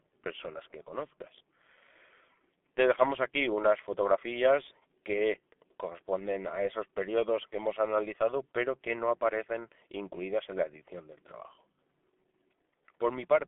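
G.723.1 codec damage runs throughout: heavy, slowly updated coding that fits about 6.3 kbit/s removes everything above 3.8 kHz, so the speech sounds muffled and hoarse, with blurred consonants.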